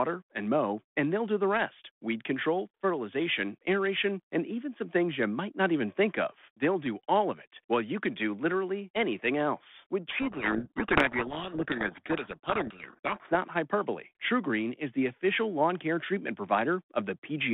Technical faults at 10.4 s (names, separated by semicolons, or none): codec payload misread